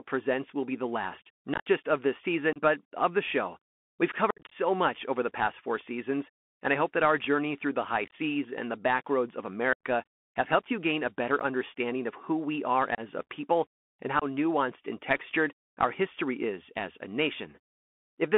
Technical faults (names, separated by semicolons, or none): Bluetooth CVSD headset codec; unconcealed Bluetooth headset packet loss